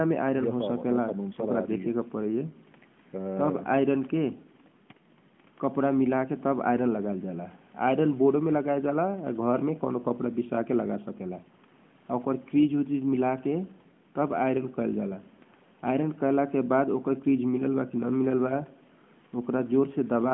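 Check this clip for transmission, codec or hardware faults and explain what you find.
No transmission, codec or hardware faults found; the speech sits in the narrow telephone band of about 150 Hz to 3.4 kHz through the call's microphone processing and the AMR narrowband mobile codec, with only the light coding texture expected of that codec's highest rate.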